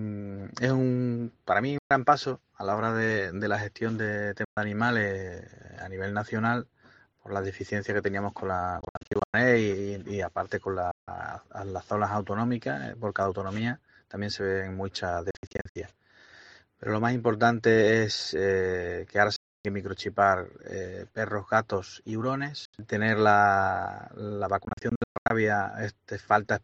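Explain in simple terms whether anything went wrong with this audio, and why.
The sound cuts to silence several times: brief gaps at 1.78, 4.45, 10.91, 19.36 and 22.65 s, and stuttering clusters from 8.81 to 9.34, 15.31 to 15.76 and 24.65 to 25.30 s. Each time it resumes further along. This is Bluetooth dropout, likely from the wireless link dropping audio packets.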